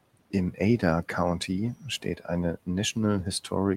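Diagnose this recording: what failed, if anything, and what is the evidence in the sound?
The failure sits in call processing: speech cut by the noise suppressor between 2.01 and 2.28 s. In that window bits of the sound get pulled down, by about 12 dB at the deepest point, for around a tenth of a second in total, so edges sound swallowed and faint. The suppressor decided those low-level parts looked like the room noise, which sits about 21 dB under the speech, and attenuated them along with it.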